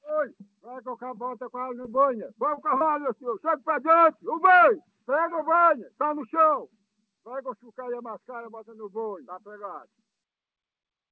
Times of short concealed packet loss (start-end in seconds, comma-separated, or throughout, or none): 1.82-1.87, 2.77-2.83